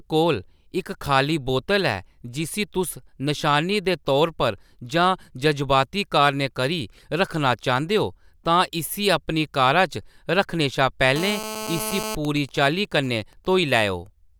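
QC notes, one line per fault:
11.16–12.15 s, GSM phone buzz: right after "रक्खने शा", a hard, raspy buzz at 217 Hz with dense harmonics sits about 8 dB below the speech. A nearby 2G phone in a call pulses continuously, and the audio circuit rectifies each burst. Unlike signalling bursts, the buzz is unbroken.
12.25–13.81 s, GSM signalling bursts: even ticks with a longer 217 Hz buzz twice a second, far quieter and well under the speech. The same phone, still in the call but with its user silent, transmits only sparse groups of bursts, so the interference comes in clusters rather than as a steady tone.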